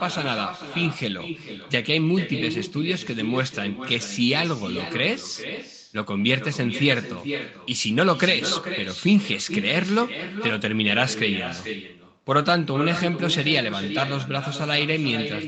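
From start to finish the speech carries an echo with no canceller. The far end is playing the call through a loudspeaker, their microphone picks it back up, and nothing strips it out, so every phrase returns roughly 0.4 s later as a fainter, thinner shadow, about 10 dB down. The band-limited sound, with nothing above 8 kHz, comes from the call path and isn't part of the problem.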